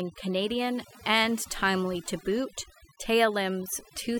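Speech marred throughout by overdone noise removal: a lowered background with twinkling specks and band-by-band losses rather than a gate's whole-signal cutoffs.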